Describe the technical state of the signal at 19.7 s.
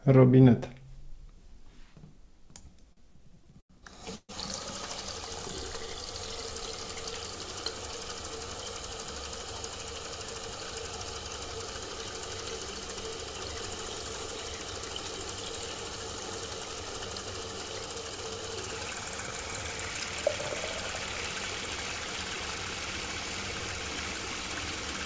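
A jitter buffer speed-up runs from 19.31 to 19.75 s. The receiver cuts about 70 ms of repeated cycles, so the sound plays at 115% speed but keeps its pitch. The waveform shows compressed, spliced segments.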